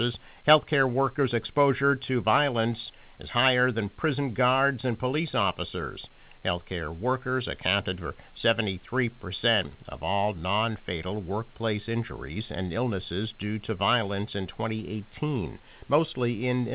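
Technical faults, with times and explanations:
Nothing's wrong here: the speech arrives over an ordinary phone-style call line with nothing above 4 kHz, and the room's background noise sits about 37 dB below it.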